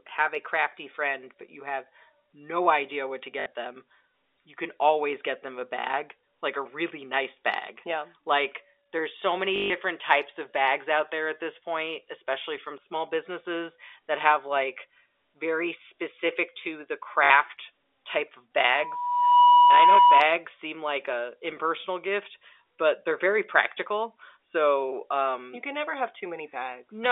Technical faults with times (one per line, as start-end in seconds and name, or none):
3.40-3.46 packet loss with last packet repeated
9.56-9.70 packet loss with last packet repeated
17.24-17.30 packet loss with last packet repeated
18.57-20.23 loudspeaker feedback squeal